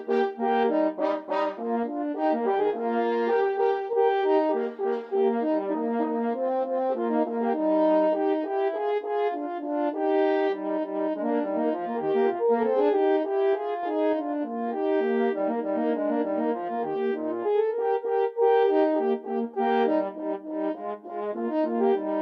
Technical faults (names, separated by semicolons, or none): none